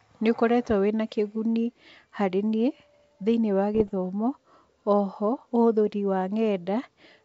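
Around 3.75 s, running to about 3.91 s, there's a short patch of bit errors on an ADPCM link. The speech turns into a rough, crackly burst with pops and quick jumps in level. Flipped bits corrupt the decoder's step size and predictor, so each error smears on for a few milliseconds. The damage fits a bit error rate somewhere under one percent, on top of the light upper-band hiss of G.722 at 64 kbit/s.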